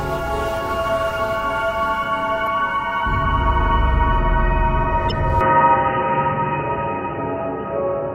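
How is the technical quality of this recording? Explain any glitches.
The recording has three audible faults: two brief stream corruptions and a lasting drop in bandwidth near the end.

At 2.44–2.48 s and 5.08–5.12 s there is damaged data in the compressed stream. The decoder misreads corrupted frames and resynchronises, producing a short glitch. On a spectrogram each appears as a thin vertical smear of broadband energy. The waveform shows a break in continuity.

From 5.41 s to the end, the input was likely switched to a poorer device. Nothing above 3 kHz survives, so the sound turns dull and boxy with no gap at the switch. A spectrogram shows the upper band abruptly emptying. The waveform shows a level step of about 5 dB and a faint new noise floor far below the signal.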